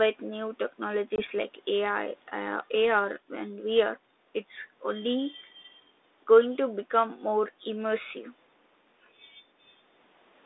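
From 1.16 to 1.22 s, packet loss on an ADPCM call leaves a hard-edged silent hole of about one 20 ms packet. Unlike a clean dropout, the decoder's predictor and step size fall out of step with the sender, so speech returns briefly distorted before settling.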